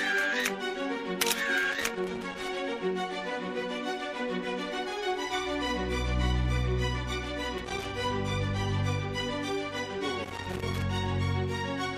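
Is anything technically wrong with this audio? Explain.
Yes. Loose connector crackle appears at 1.71–2.48 s, 7.58–7.85 s and 10.24–10.82 s: a shifting contact chops the signal into irregular scratchy bursts, seen as ragged waveform dropouts and broadband vertical spectrogram streaks.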